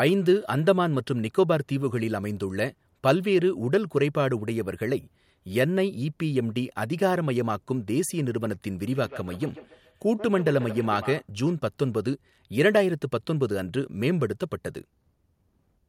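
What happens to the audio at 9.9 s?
At 9.9 s the speech is caught in a feedback echo between two devices, running from 8.88 to 11.29 s. A second device replays the signal into the microphone, so each syllable returns roughly every 150 ms, up to about 14 dB below the speech. On a spectrogram these show as fainter, thinning copies spaced evenly behind each onset.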